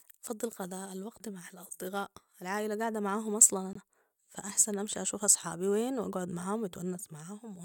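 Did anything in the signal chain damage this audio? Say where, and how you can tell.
Yes, at the codec stage: a corrupt frame muted in this speech right after "العائلة قاعدة معاهم أصلا", from 3.73 to 3.76 s. The audio drops abruptly to silence for about 32 ms, which points to a couple of compressed frames whose damaged bits made the decoder reject them, so the player substituted silence. Timing is preserved. The waveform shows a flat-line gap with hard edges, and the spectrogram shows a clean vertical blank band across all frequencies.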